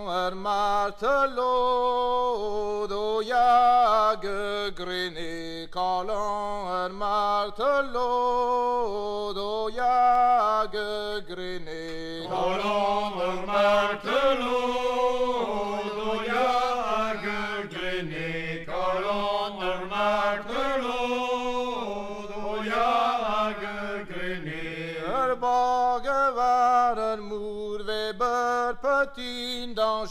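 No technical faults can be heard anywhere in this recording.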